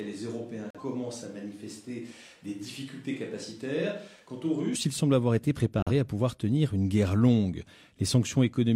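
The close microphone's feed appears to be missing from the start, so the audio is likely taken from a more distant microphone until 4.75 s: the speech is hollow and roomy with thin bass, roughly 10 dB quieter, and room noise sits only about 30 dB below it. The switch back to the close sound is abrupt, just before "ils semblent avoir été". Corrupt frames rejected by the decoder were replaced with silence, muting the audio at 0.70–0.83 s and again at 5.78–5.91 s, between "ils semblent avoir été" and "à pouvoir tenir une". Both gaps begin abruptly, and their lengths fit a few whole codec frames.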